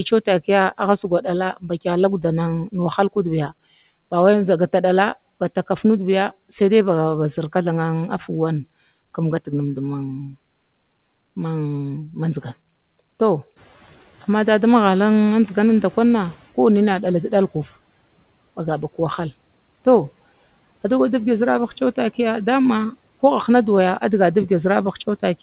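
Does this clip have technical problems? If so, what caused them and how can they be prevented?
Yes. From 13.56 s the room noise jumps by roughly 12 dB. The noise suppressor is catching up. The noise passes through with less reduction, then sinks by about 10 dB once its estimate adapts, at 16.45 s. A suppressor that tracks sudden noise rises faster would prevent this.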